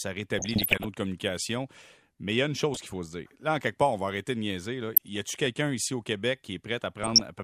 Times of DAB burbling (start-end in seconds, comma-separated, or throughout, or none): 0.37-0.87, 2.74-2.96, 4.95-5.48, 7.03-7.20